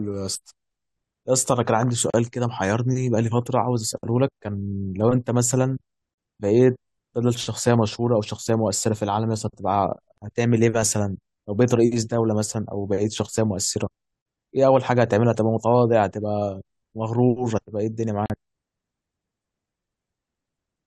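Brief silences of about 40 ms cut into the speech at 2.10, 6.14, 10.18, 14.22 and 18.26 s, every 4 s, with smeared edges. These are gaps at a join of encoded pieces: each separately encoded segment kept its leading encoder delay and end padding.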